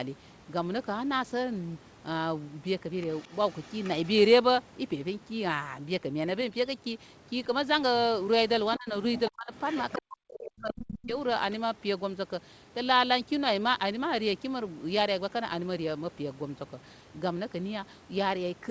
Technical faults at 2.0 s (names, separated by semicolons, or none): none